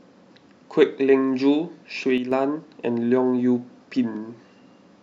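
At 2.18 s the speech abruptly drops by about 6 dB and stays there until 2.32 s, a dip of roughly 140 ms, before snapping back to full level. The likely cause is one channel dropping out of a stereo feed: once the two sides are summed to mono, losing one halves the shared signal. On a waveform this appears as a sharp, flat-sided notch in the envelope; a spectrogram shows a brief vertical band dimmed evenly across all frequencies.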